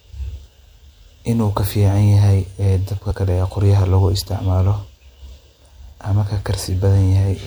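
At 3.10 s the speech jumps forward as compressed frames are skipped: one frame of about 26.1 ms, roughly 30 ms of audio, never reaches the output.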